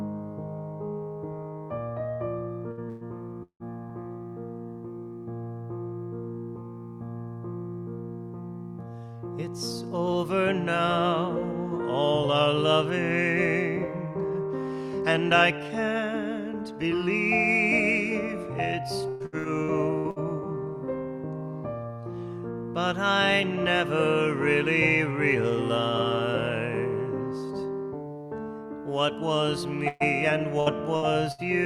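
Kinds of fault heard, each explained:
Repeated packet loss (robotic sound): Audio drops out in quick bursts, and each hole is bridged by stretching the last sound. This happens at 2.7 to 3.9 s, 19.1 to 20.2 s and 29.9 to 31.4 s. Gaps reach 170 ms, leaving choppy stretches with pieces missing.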